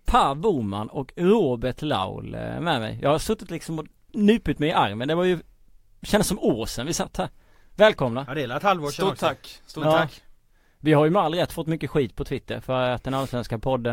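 No technical faults can be heard anywhere in the speech, and the signal holds steady from beginning to end with nothing interrupting or altering it.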